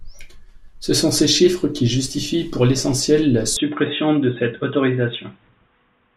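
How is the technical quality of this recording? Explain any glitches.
The recording has one clear fault partway through. From 3.57 s, right after "justifient pour l’essentiel la", to the end, the input likely switched to a poorer device. The speech then loses everything above 3.8 kHz and turns dull and boxy, with a faint new noise floor. The level stays roughly the same and there is no gap at the switch.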